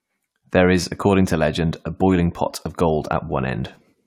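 No technical faults can be heard anywhere in this speech recording. From its first moment to its last, nothing in the sound points to a problem with how it was captured or delivered.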